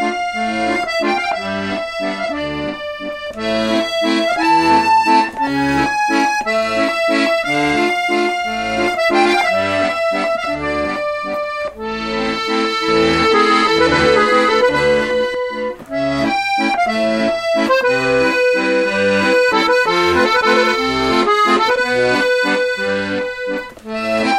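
A second capture path or an out-of-step edit likely laid the audio in twice from 12.89 to 15.35 s. This doubled audio track trails the original by roughly 0.7 s at about equal loudness, a dry, full-band repeat that starts and stops abruptly.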